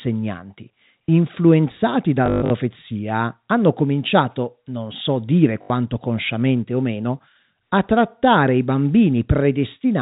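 At 2.26 to 2.50 s the speech breaks up from packet loss with the last packet repeated: about 180 ms goes missing, scattered over 240 ms, with the longest gap 120 ms. The receiver fills each gap by replaying the previous packet, which fits 20 ms packets. The repeats seldom align with the pitch, and the longer run buzzes at 50 Hz as a robotic stutter. A shorter 80 ms burst recurs at 5.62 to 5.70 s, over telephone-band G.711 audio.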